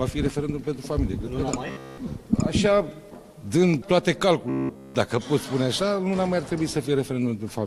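From 1.68 to 1.98 s and again from 4.50 to 4.95 s, robotic sound from repeated short buffers turns essentially all of the sound into a rigid metallic buzz locked at 66.8 Hz, likely from a roughly 15 ms chunk being looped while the real audio is skipped. Unlike a dropout or stutter, the sound never falls silent; it holds that fixed pitch throughout.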